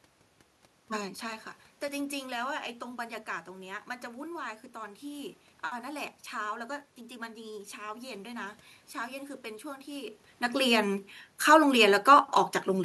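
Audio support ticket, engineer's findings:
No system faults found.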